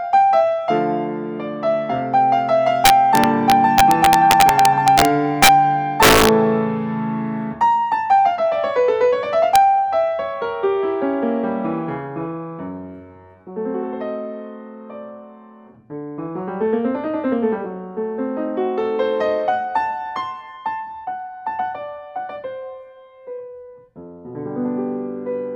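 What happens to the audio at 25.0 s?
Nothing goes wrong at 25.0 s; the audio is intact at that moment.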